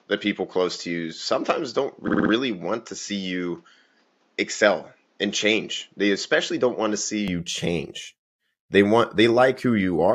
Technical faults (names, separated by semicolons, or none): input switched to a poorer device; repeated frames